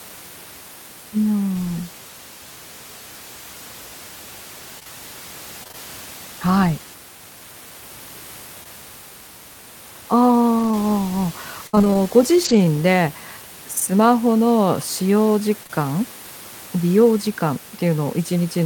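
From 4.79 to 5.75 s there's repeated packet loss, giving a robotic sound: five short gaps, each patched by stretching the last sound, so it turns choppy. Around 8.63 to 8.67 s a short concealed packet loss leaves a quick smear. From 10.59 to 12.66 s nine more gaps, the longest 62 ms, bring back that robotic chop. Two further short losses, back to back at 15.63 to 15.71 s, each blur a brief moment.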